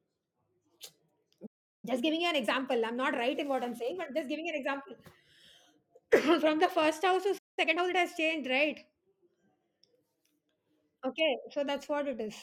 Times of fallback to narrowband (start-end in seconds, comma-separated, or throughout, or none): none